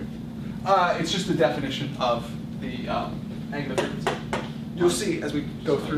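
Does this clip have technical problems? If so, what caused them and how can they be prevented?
No, nothing in this one stands out as a technical problem, so there's nothing here that needs fixing or guarding against.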